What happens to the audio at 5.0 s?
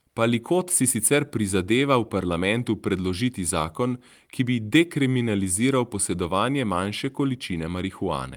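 Nothing goes wrong at 5.0 s: the speech runs on intact through that moment, with no dropout, click or distortion.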